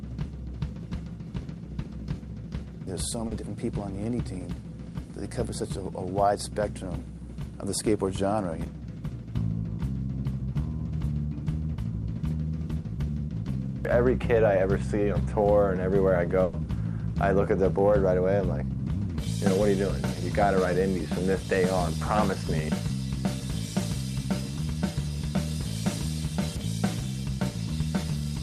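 At 3.27 s to 3.33 s there is a brief smear or wobble lasting about 40 ms, where the sound seems to stretch rather than move on, and a short sound there may not come through. This is short concealed packet loss: about 40 ms of audio never reached the decoder in time, so the receiver bridged the hole by extending what came just before and then blended back into the real signal.

From 16.43 s to 16.55 s the sound turns into a held continuation that fades over about 100 ms before the audio picks up again further along. Depending on what was playing at that moment, that continuation is either a buzz that keeps the last pitch or a hiss. This is a burst of packet loss. Packets were lost or arrived too late, and the receiver filled the 100 ms gap by carrying the last sound forward and turning it down. About 100 ms of the original audio is missing when playback resumes, and the gap is covered by that fill rather than by silence.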